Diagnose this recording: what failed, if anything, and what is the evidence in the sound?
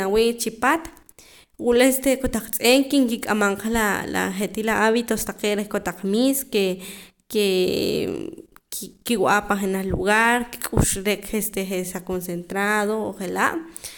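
Nothing failed in this recording, and no stage of the chain leaves a mark on the sound. There is no evidence of a fault anywhere in the speech.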